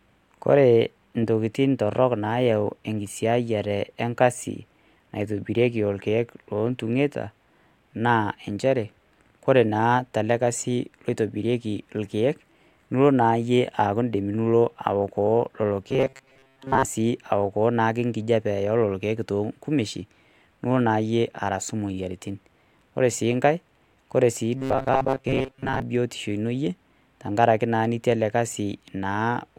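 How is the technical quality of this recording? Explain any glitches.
Two stretches of robotic sound from repeated short buffers mar the speech. The first runs from 15.89 to 16.85 s, and the second from 24.58 to 25.82 s, ending just before "biyotishu ino iyie tengaraki". The likely cause is audio arriving too slowly, so the player keeps looping a tiny fragment of roughly 7.5 ms. Most of the real signal is skipped, and the loop imposes a rigid 133 Hz metallic buzz that still roughly tracks the syllables. Unlike a dropout, there is no silence. Unlike a mains hum, the pitch is locked to the loop length rather than steady in the background.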